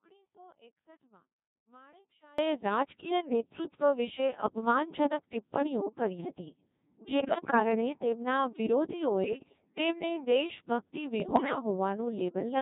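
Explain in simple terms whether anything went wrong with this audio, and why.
The whole clip of speech has been squeezed through the Codec 2 vocoder, a very low-rate digital radio voice system. It sends only a rough description of the voice, and the receiver rebuilds it from simple tones. That is why the speech sounds heavily robotic and buzzy throughout.

From the very start until about 2.38 s, the speech is missing. Only a very faint trace of sound remains, far below normal level. Then the voice returns abruptly. This is likely an audio dropout to a faint residue, where the signal was lost but the line stayed open.

Three short bursts of bit errors on digital voice radio follow, at about 7.2 to 7.6 s, 9.24 to 9.78 s and 11.2 to 11.59 s. Corrupted data reached the decoder, so the rebuilt voice jumps in pitch and loudness and breaks into warbling, bleepy gibberish.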